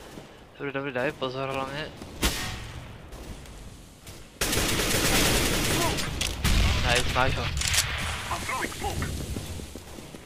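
From 0.10 s to 10.21 s the audio is broken by periodic USB or driver dropouts every 0.1 s. Each time, roughly a millisecond of signal is replaced by silence while the driver stalls, giving a steady ten-per-second ticking that is heard only while sound is present.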